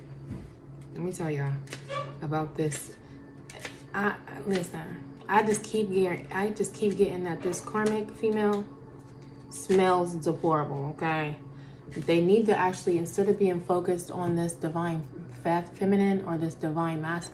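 Nothing stood out on listening to the audio.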